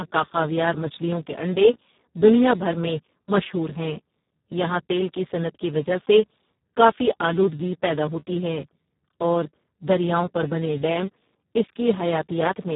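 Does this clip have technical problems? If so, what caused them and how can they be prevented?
Yes. Throughout the speech the Speex codec has been driven hard. The voice is noisy, hoarse and edging on robotic because this CELP coder has too few bits to describe the excitation, which fits a setting around 4 kbps. Nothing sounds above 3.8 kHz. Unlike a simple low-pass filter, the voice's own texture is damaged, and unlike MP3-style coding it buzzes rather than swirls. Prevent it by using a higher Speex quality setting or a modern codec such as Opus.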